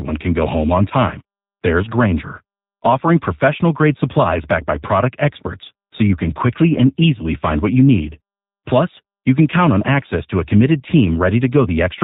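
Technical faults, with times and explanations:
Throughout, G.729 codec: the speech is rebuilt rather than carried, with a vocal tract filter shaping a pitch-driven excitation of only a few pulses per frame. That gives the rough, slightly synthetic, plainly audible texture, consistent with an 8 kbit/s speech codec. On a spectrogram, energy stops sharply near 4 kHz with nothing above, and harmonics look smeared between formants. The waveform shows a simplified, pulse-like fine structure.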